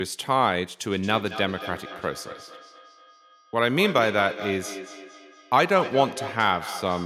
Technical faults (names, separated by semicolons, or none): feedback echo between two devices